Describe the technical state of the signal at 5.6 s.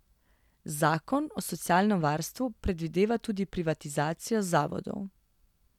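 At 5.6 s the speech signal is intact, with no audible fault at that point.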